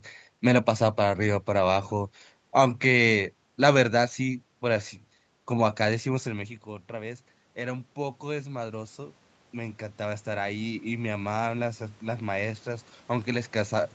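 From 6.07 s the automatic gain rising kicks in: the level drops about 15 dB, and the gain creeps up about 11 dB until 13.58 s, swelling voice and room noise together.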